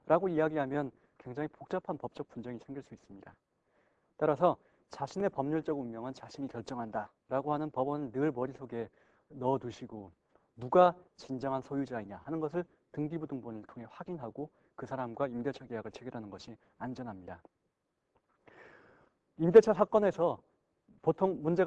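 No technical faults are audible.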